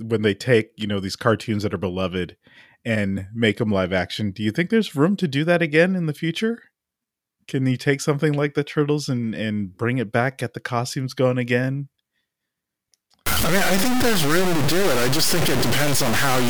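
A speech recording that, from 13.26 s to the end at 16.5 s, collapses into harsh, grainy distortion that moves with the voice; the sound is likely reduced to about 3 bits by truncation with no dither, so the quantisation error tracks the signal and sits roughly level with it. Quiet passages sputter or drop out between steps. A waveform shows coarse staircase levels, and a spectrogram shows broadband hash following each syllable.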